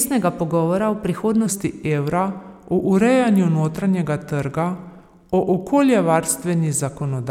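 From 1.46 s, just after "pogovora o", the speech suddenly turns deeper and more sluggish and stays that way to the end: the voice drops by about two semitones and the pace slows to 0.893 of normal speed. Pitch and tempo shift together at one instant, the signature of a section at the wrong speed. The likely cause is that this stretch was played back or rendered against the wrong clock rate.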